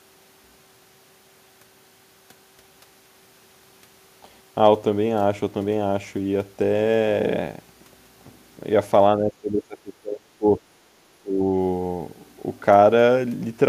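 From 9.17 to 10.6 s, and again from 11.17 to 11.41 s, the speech dips sharply, by as much as about 25 dB. This is likely speech suppressed in double talk: an echo canceller, confused by simultaneous far-end audio, pulled this talker down along with the echo.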